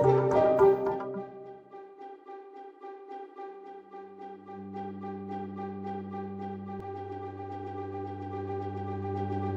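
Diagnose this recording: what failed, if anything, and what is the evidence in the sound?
From 6.80 s to the end, every sound is followed by a second, equally loud copy trailing about 150 ms behind. The copy is full-band and dry, with no decay or room colour, and it begins abruptly rather than building up. This is a doubled audio track, likely from a recording-chain fault where the same signal was captured again through a slower path, or an edit stacked two out-of-step copies, so both are mixed together.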